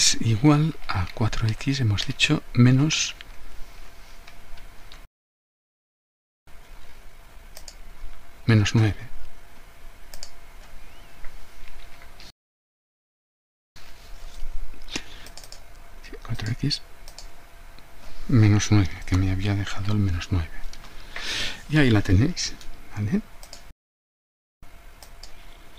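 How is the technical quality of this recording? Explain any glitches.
The recording has repeated playback interruptions, each followed by a hurried stretch as playback catches up.

Playback stall: the audio stops dead at 5.05 s for 1.42 s, at 12.30 s for 1.46 s, and at 23.71 s for 0.92 s. The player likely ran short of buffered data or had its thread blocked.

Time-compressed catch-up: after each stall the audio runs fast, at 1.1 times speed from 6.47 to 9.47 s and from 13.76 to 16.76 s, then at 1.15 times from 24.63 s to the end. Small pieces are cut out and cross-faded, so pitch stays normal, unlike a simple speed-up.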